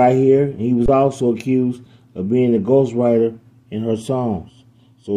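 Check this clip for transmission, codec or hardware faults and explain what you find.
One fault stands out, an underrun with held sample from 0.86 to 0.88 s. The output buffer ran dry for about 23 ms, a gap of 1024 samples. During the gap the converter kept putting out its last value. The waveform goes flat, so the sound stops almost silently. About 20 ms of live audio was lost in that time.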